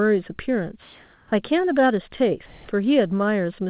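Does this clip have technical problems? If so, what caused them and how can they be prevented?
Yes. Comfort noise in place of the background occurs from 0.82 to 1.32 s and from 2.46 to 2.68 s. The real background, about 32 dB below the loud parts, becomes a steady, featureless hiss at nearly the same level. The likely cause is discontinuous transmission: the sender stopped sending during pauses, and the receiver synthesised noise instead. Disabling DTX on the sending side prevents this.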